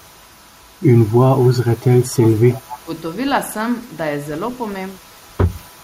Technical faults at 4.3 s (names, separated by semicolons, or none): none